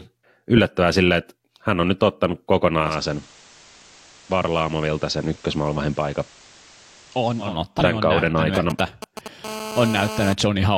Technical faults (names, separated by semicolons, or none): digital radio blending to analogue; GSM signalling bursts; GSM phone buzz